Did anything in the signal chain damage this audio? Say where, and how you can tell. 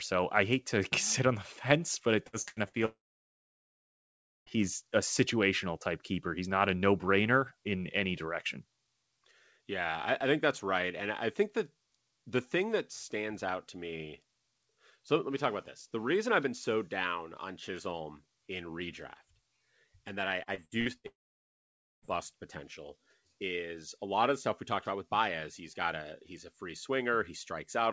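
Yes, at the network stage. Repeated packet loss (robotic sound) shows up twice. From 2.27 to 2.76 s, four gaps chop the sound, the longest about 86 ms. Almost half that span is patched. From 20.43 to 21.07 s, just after "and that I", six gaps follow, the longest about 65 ms. Each hole is filled by stretching the last bit of sound, so it turns choppy.

A long network dropout follows each burst. It is likely a network outage. From 2.85 to 4.49 s the sound smears briefly into a fading buzz or hiss, then goes silent for about 1.5 s. It returns at "a situational type keeper" with that stretch missing. From 21.07 to 22.05 s the same happens, with about 0.9 s of silence before "potential is a lot". The receiver concealed briefly, then simply had nothing to play. The call codec path, whose top end stops at 8 kHz, points to G.722 at 64 kbps.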